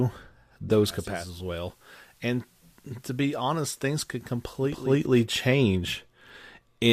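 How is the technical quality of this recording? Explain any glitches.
Technical quality is compromised by digital radio blending to analogue from 0.85 to 5.06 s: the receiver cross-fades over 464 ms to FM, dropping level about 6 dB and adding hiss roughly 30 dB down, before blending back.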